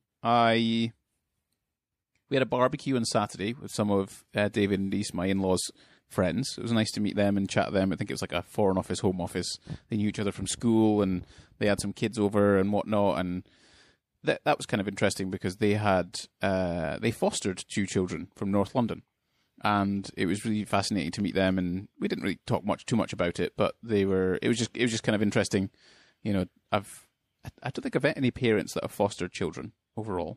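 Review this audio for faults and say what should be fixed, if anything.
Right through the speech there's a watery, swirly quality, with chirpy, metallic esses and softened consonant attacks and a dull, cut-off top end. That's likely MP3 compression at a low rate, around 64 kbps by the sound of it, where the encoder drops the treble and lets weak detail flicker in and out. Keep a lossless master and only encode at a generous bitrate as the last step.

From 29.03 s to 30.36 s there's channel delay (comb filtering). One channel runs about a sample late, about 0.02 ms, so when the two are folded to mono the shared content cancels up near 20 kHz, shaving off the extreme top and leaving a slightly duller end. Check channel alignment before any mono fold-down so both sides stay sample-locked.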